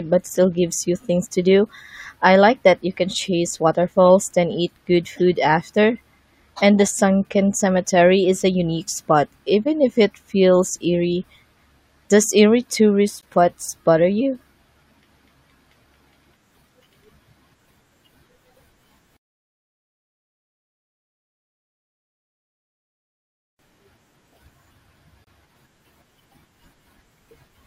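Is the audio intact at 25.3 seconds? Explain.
No. Right around that point, from 25.24 to 25.27 s, a gap between stream segments cuts a hole of about 26 ms into the speech. The timestamps of two adjoining segments, which fits 6-second segments, leave a short space that the player fills with silence, so the sound stops and restarts with hard edges. Unlike a dropout from lost packets, nothing is missing: the speech resumes exactly where it broke off, merely delayed.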